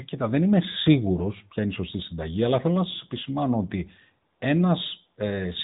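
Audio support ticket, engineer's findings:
AMR narrowband mobile codec throughout: spectrogram cut flat above 3.8 kHz; buzzy, synthetic speech from frame-based vocal-tract modelling, with audible coding damage that fits a 10.2 kbps mode.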